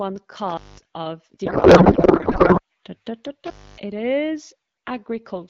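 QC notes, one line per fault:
0.48–0.85 s and 3.46–3.78 s, intermittent contact: sound drops out for about 0.2 s, then 0.27 s, with crackle at the edges as the loose connection opens and recloses.
1.45–2.61 s, codec payload misread: the speech turns into garbled warbly noise, which fits octet-aligned AMR being unpacked as bandwidth-efficient, so every field lands in the wrong place.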